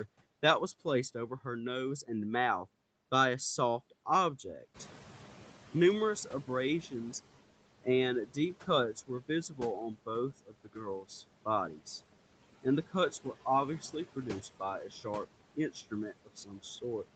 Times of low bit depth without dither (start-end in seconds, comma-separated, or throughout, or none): none